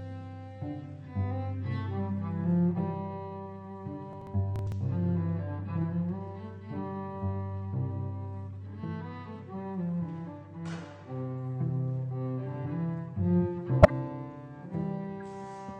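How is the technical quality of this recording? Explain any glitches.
The recording has two kinds of glitch: one stretch of crackle and two short decoding artefacts.

From 4.13 to 4.72 s there is processor overload crackle. The processor missed a handful of buffer deadlines. That fits buffers of a few milliseconds. Each missed buffer was skipped, leaving a tiny hard-edged gap. Together the gaps sound like gritty tearing over the sound.

At 13.82 to 13.90 s and 15.20 to 15.22 s, a corrupt frame was decoded. Damaged bits sent energy to the wrong frequencies. The first, about 80 ms across a few frames, is a loud burst near about -5 dBFS. The second, one frame, is a faint blip near about -40 dBFS.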